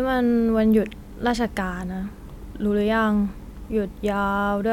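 A short speech recording with nothing technically wrong to report, so there are no times or causes to give.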